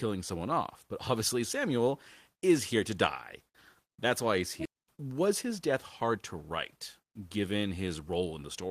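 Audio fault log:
4.65 s, skip ahead: Right after "why he's" the speech jumps forward with no gap, and about a second of audio is simply missing, its two sides butted together. A stretch was dropped in transit or by an overflowing jitter buffer while later audio already waited.
4.76 to 6.18 s and 6.99 to 8.23 s, jitter buffer speed-up: The speech sounds hurried at unchanged pitch, running at 106% and then 112% speed. The receiver trimmed many short pitch-period pieces, roughly 100 ms and then 150 ms in total, to shrink an overfilled buffer.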